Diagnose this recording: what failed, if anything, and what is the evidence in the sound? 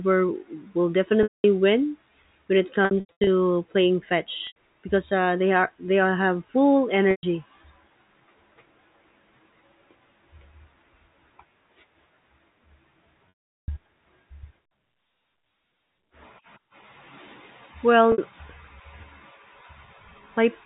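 The network stage dropped packets, and the receiver covered each gap with packet loss concealment by pitch repetition. It looped the last pitch period and faded it out. Gaps fall at 1.23 s (210 ms), 2.85 to 3.27 s (270 ms lost in scattered runs up to 90 ms), 4.47 s (90 ms), 7.11 s (120 ms), 13.29 s (390 ms) and 18.12 s (60 ms), which fits 30 ms packets. Short gaps sound held and buzzy over the 4 kHz G.711 band. The longer ones fade to silence before the speech cross-fades back.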